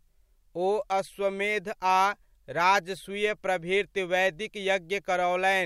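No technical faults are audible anywhere in the speech.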